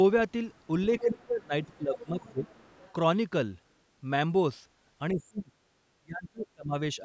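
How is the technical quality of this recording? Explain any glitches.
The recording has two recurring glitches, both typical of a hands-free call where the echo canceller struggles with the far end.

Other side's voice leaking through appears at 0.53–0.67 s, 0.99–1.24 s, 1.63–1.75 s and 1.95–2.93 s. A second, fainter voice sits under the talker, barely audible at first and later only about 15 to 25 dB down. The likely cause is loudspeaker playback picked up by the microphone and not fully cancelled. Unlike a dropout, this adds a sound that doesn't belong rather than removing the talker.

Speech suppressed in double talk occurs at 1.0–2.49 s, 5.13–5.58 s, 5.99–6.75 s and 6.95–7.0 s. Here the talker's own voice sinks, by as much as about 30 dB at 6.0–6.75 s and only slightly at the very end, coming and going in chunks. Both sides were probably talking at once, so the canceller turned everything down rather than separate them. 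This is the reverse of leakage: the wanted voice loses level and high end instead of gaining an extra voice. The two overlap from 1.0 to 2.5 s, where the talker dips while the leaked voice is present. The call's microphone processing limits the band to 8 kHz, which is expected and not a fault.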